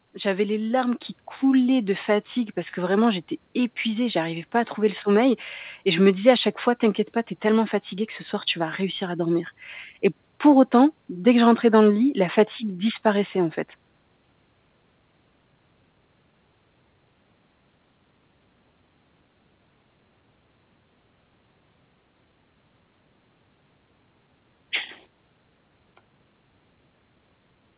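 At 1.02 s, between "les larmes" and "coulaient de fatigue parce", the microphone volume is stepped up: the call software judged the input too quiet and raised the device gain by about 6 dB in a single move. Speech and room noise jump together and stay louder, which separates it from a gradual automatic gain ramp or a speaker simply raising their voice. Everything passes through the narrowband call path, with nothing above 4 kHz.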